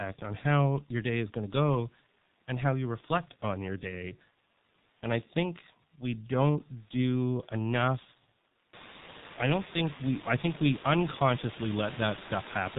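From the first syllable to the end, the speech passes through the G.723.1 codec, heavily damaged and consistent with a rate near 6.3 kbit/s. Nothing survives above 4 kHz, so it sounds muffled, with hoarse vowels and smeared consonants as the slow voice model lags each change. A spectrogram shows a flat ceiling at 4 kHz and blocky 30 ms frames. Room noise climbs about 22 dB around 8.5 s, settling about 16 dB below the speech.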